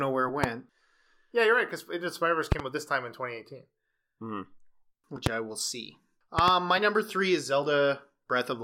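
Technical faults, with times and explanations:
0.44–0.46 s, 2.52–2.62 s, 5.26–5.29 s and 6.39–6.51 s, loud pop: sharp thumps roughly 15 to 20 dB above the speech, doubled at 2.52 and 6.39 s, likely from an electrical pulse such as a switch or static. Unlike a dropout, the speech continues underneath uninterrupted.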